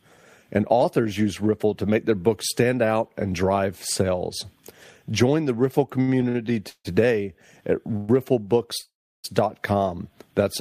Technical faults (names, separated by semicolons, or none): repeated stalls (stutter); call audio freeze